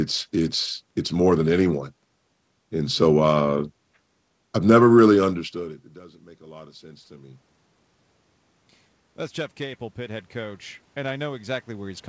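A speech recording where automatic gain rising occurs twice: from 5.98 to 7.48 s, after the input drops by about 24 dB, the gain climbs about 5 dB, then again from 9.57 s to the end. Unlike the talker moving back near 5 s, voice and room noise swell together.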